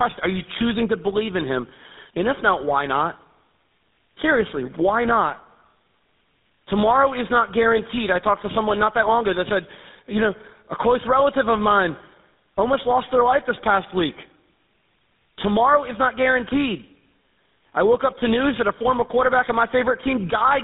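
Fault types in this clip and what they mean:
Tandem speech coding: the speech passes through two low-rate speech coders in a row, with the second re-encoding the first one's already damaged output. The artefacts compound, and the sound fits a GSM full-rate link, a G.711 A-law hop, then GSM full-rate again. It sounds rough, muffled and warbly. On a spectrogram nothing appears above 3.8 kHz, and the harmonics look smeared and blotchy. The waveform shows a coarse, uneven envelope.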